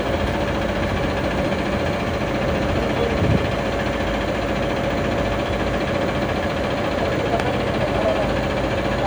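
Nothing in the audio stands out as a technical fault, so there's nothing here to flag.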